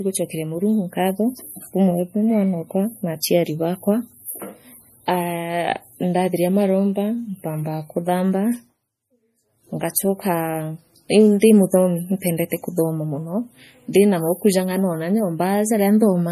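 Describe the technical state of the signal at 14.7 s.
At 14.7 s, as throughout the clip, the speech shows what is likely MP3 compression at a starved bitrate, fitting roughly 40 kbps. The encoder discards everything above 15.2 kHz and drops weak frequency lines frame by frame, leaving a dull, watery, swirling texture.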